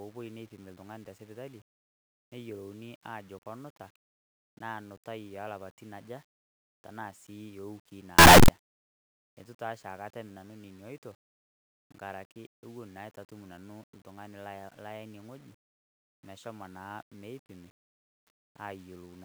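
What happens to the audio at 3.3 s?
Nothing goes wrong at 3.3 s: the speech carries on intact through that moment.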